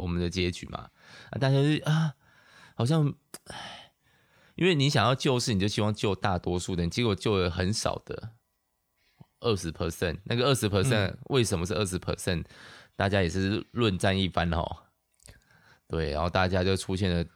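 No technical faults can be heard anywhere in the recording, and the speech signal stays intact and continuous throughout.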